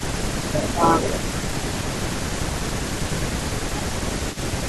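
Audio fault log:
0.00–1.03 s, 1.92–2.18 s, 3.04–4.17 s: speech suppressed in double talk. The voice dips by roughly 10, 15, then 20 dB, likely from the echo canceller ducking overlapping talk. The waveform shows envelope notches and the spectrogram shows fading upper bands.
0.00–1.95 s, 2.54–4.66 s: echo leak. A copy of the voice trails by 0.25 s, about 10 dB below it and later about 20 dB below. It is likely loudspeaker pickup the canceller missed, and the spectrogram shows faint repeated harmonic patterns offset in time.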